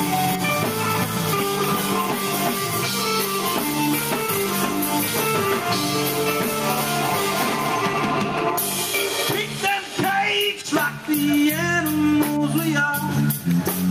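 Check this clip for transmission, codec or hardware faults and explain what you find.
One fault runs through the whole clip. Gain pumping, throughout: the gain is pulled down by around 5 dB on each loud sound, likely from excessive gain driving a fast limiter.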